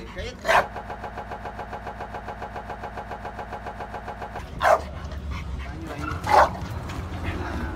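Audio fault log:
0.76–4.39 s, broken-record loop: a 138 ms fragment repeats 26 times back to back, likely from a stalled player or stream resending its last buffer.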